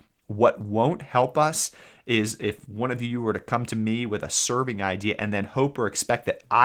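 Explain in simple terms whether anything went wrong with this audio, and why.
Nothing went wrong with this audio; there is no fault to hear anywhere in the recording.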